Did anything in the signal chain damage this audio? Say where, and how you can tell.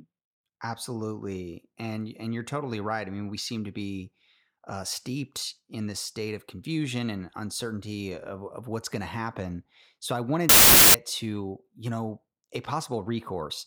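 Yes. A wrong sample width fault occurs at the sample-format conversion stage, from 10.49 to 10.94 s, just before "to you know a". The speech there collapses into loud, harsh noise with the voice buried underneath, slowed to about two-thirds speed and lowered in pitch. That 0.667 ratio fits packed 24-bit samples being read as 16-bit. Bytes from neighbouring samples get spliced together, so only some values keep the signal's true top bits.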